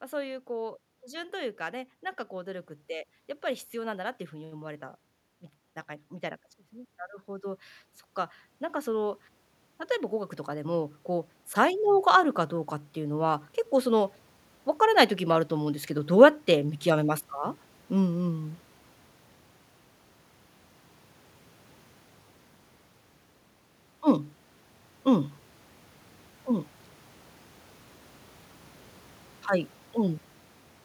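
Automatic gain rising from 8.83 to 18.61 s: the gain control judged the speech input too quiet and lifted its gain by about 10 dB, swelling voice and background together.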